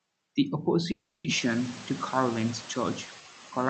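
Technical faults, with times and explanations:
Throughout, noise suppressor artifacts: background noise drops about 6 dB between phrases and swells under speech, leaving a residue that shows on a spectrogram as a blotchy, flickering noise floor.
0.91–1.27 s, call audio freeze: the last sound stretches into a fading buzz or hiss for 330 ms, likely because the jitter buffer ran empty. Speech then resumes late with nothing lost, and the waveform shows a smeared, repetitive stretch.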